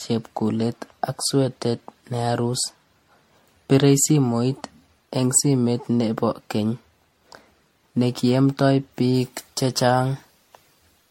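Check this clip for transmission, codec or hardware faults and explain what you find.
Two faults are audible in this speech clip.

From start to finish the sound is swirly, hollow and smeared, with blurred attacks. This is likely generation loss from around ten MP3 passes near 64 kbit/s. A spectrogram shows speckled holes and nothing above 16.5 kHz.

From 9.15 s to the end, pre-emphasis is left on. A CD-style 50/15 µs treble boost goes uncorrected, lifting 10 kHz by about 8 dB relative to 1 kHz. The sound turns thin and sibilant, and the spectrogram shows a brighter upper band.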